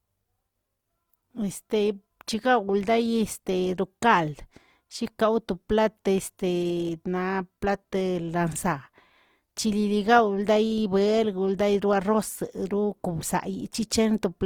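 Throughout the speech, tones come out rough, grainy and noisy rather than swirly, with the band reaching to about 20.2 kHz. This is likely Opus compression in its music (CELT) mode, with bands refilled by folding or noise, which fits a rate near 24 kbps.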